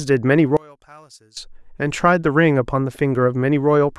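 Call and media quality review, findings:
Speech nearly disappears 0.57–1.37 s, down about 28 dB, just a faint residue left. Looks like one channel inverted, likely a polarity flip on one stereo leg. Mono fold-down cancels the shared centre content.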